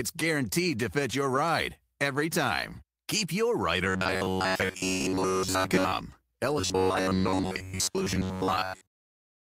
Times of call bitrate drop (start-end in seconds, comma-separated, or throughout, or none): none